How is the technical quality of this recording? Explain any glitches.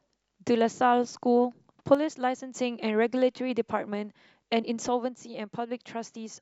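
The recording has two glitches. From 1.95 to 2.56 s, and from 4.88 s to the end, the speech abruptly drops about 6 dB. This is likely one channel drops out. Unlike a fade, the step is instant, and the first one recovers just as suddenly.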